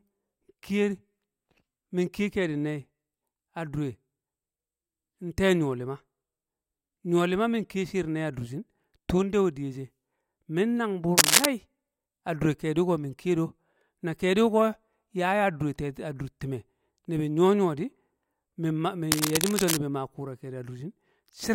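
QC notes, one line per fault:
11.17–11.46 s, cable scratch noise: just after "min nang buur", a dense, uneven burst of scratchy rustling sits over the speech, somewhat louder than the voice. It is likely a worn cable or connector being moved, with its contact resistance jumping rapidly and injecting bursts of noise into the signal.
19.12–19.78 s, cable scratch noise: a longer patch of the same crackling rustle, about as loud as the speech. The same likely cause applies: an unsteady contact briefly disturbed during recording.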